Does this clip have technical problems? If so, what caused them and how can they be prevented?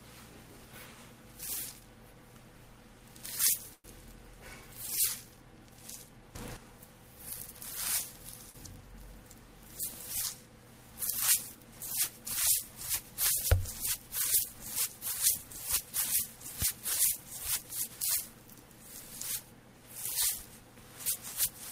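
Yes, four kinds of fault can be heard.

Call audio freeze, 3.73 to 3.86 s: the sound stalls, and the last bit is stretched into a fading buzz for about 106 ms, including roughly 50 ms of near silence. Then it picks up exactly where it left off. The likely cause is delayed packets draining the jitter buffer, which adds 106 ms of delay without losing anything. A spectrogram shows a smeared, repeating band decaying to blank before normal detail returns. A deeper adaptive jitter buffer or a steadier network path would prevent it.

Sudden gain jump, 6.35 to 6.57 s: the level leaps by about 11 dB from one sample to the next and stays up for about 0.21 s. The background noise rises with it. On the waveform the envelope steps abruptly, and on a spectrogram every frequency brightens at once, including the noise floor. The likely cause is a digital gain or bit-shift change applied without a ramp. 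Smoothing every gain change over a few milliseconds would prevent it.

Short concealed packet loss, 8.50 to 8.56 s: about 40 ms of audio never arrived, and the receiver filled 39 ms by extending the preceding sound before blending back. It comes across as a brief smear or wobble. A spectrogram shows a short stretch where the detail goes soft or repetitive. Forward error correction or packet redundancy on the link would prevent it.

Jitter buffer speed-up, 16.80 to 18.41 s: the audio runs at about 105% speed with unchanged pitch and sounds slightly hurried, as the receiver trims an accumulated backlog. Short pitch-period-sized pieces, roughly 70 ms in total, are cut out many times in a row. On a spectrogram the events are compressed in time while harmonic spacing stays the same. Smoother packet delivery, so that delayed packets don't arrive in bursts, would prevent it.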